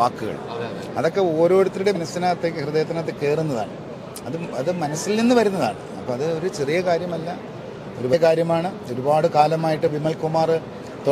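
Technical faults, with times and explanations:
1.95, 4.21, 8.12 and 9.87 s: compressed frames skipped. Whole frames are never decoded, so the audio jumps ahead by roughly 0.1 to 0.2 s.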